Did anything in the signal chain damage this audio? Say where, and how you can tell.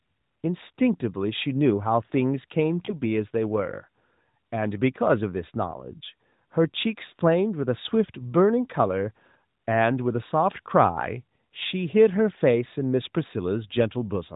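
Yes. Around 2.86 to 2.92 s the speech gives a brief dip or warble, then recovers weak or rough for a moment. These are lost AMR speech frames, consistent with a single 20 ms frame failing its checksum over the radio link. The decoder bridged the gap by repeating the last good pitch and vocal-tract settings at reduced gain.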